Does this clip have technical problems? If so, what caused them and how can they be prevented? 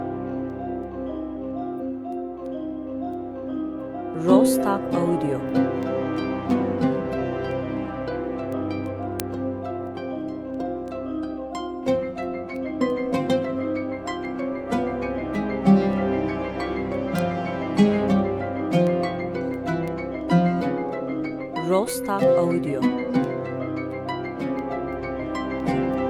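Yes. Word clock ticks run from 0.16 s to 25.94 s as sharp clicks roughly every 0.3 s, around seventy in all. The receiving device runs on its own clock, off the sender's by something like 70 ppm, so one sample slips at each tick. Their even spacing sets them apart from random corruption. Locking the receiver to the incoming digital signal, or to a shared word clock, prevents this.

Damaged data in a compressed stream appears as brief disruptions from 1.77 to 1.82 s and from 17.09 to 17.14 s. At each point the decoder hits corrupted frames, loses sync and skips to the next frame header. These are isolated bursts, not a regular pulse. Verifying files with checksums and using error-checked transfer prevents this.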